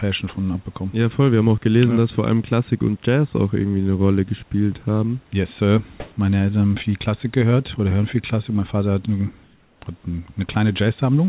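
At 6.0 s the room background gives way to a flat, featureless hiss for 160 ms. It sits about 10 dB above the real background. At 9.44 s it happens again for 380 ms, this time about 2 dB quieter. Both times the natural room texture vanishes. This is comfort noise in place of the background. The likely cause is discontinuous transmission. The sender goes silent in pauses, and the receiver fills the gap with synthetic noise.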